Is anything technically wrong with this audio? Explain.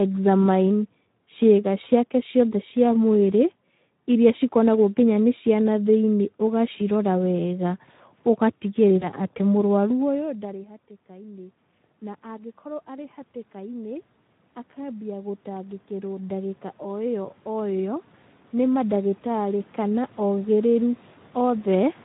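Yes, there are three kinds of fault in this speech recording.

Speex codec damage runs through the whole clip and is plainly audible. The sound fits a low bitrate of around 11 kbps. With too few bits for the excitation, the voice turns noisy and hoarse. On a spectrogram the harmonics look smeared, and any content above 4 kHz is a diffuse, noise-like wash rather than clear structure.

VoIP packet loss concealed by the speech codec occurs from 8.99 to 9.08 s. The gap is consistent with a single lost 20 ms frame. The decoder filled it by extrapolating the last pitch and filter, giving a brief stand-in that fades. The voice then stays weak until about 9.08 s, because each frame builds on the previous one. The waveform shows a short, fading stretch.

Automatic gain rising happens twice. Around 10 s the talker moves away from the microphone and the level drops by about 23 dB. From 10.06 to 14.1 s the gain climbs by about 6 dB. 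It climbs again from 14.74 to 21.93 s, by about 13 dB. Voice and room noise swell together, so the waveform envelope and the noise floor rise gradually in step.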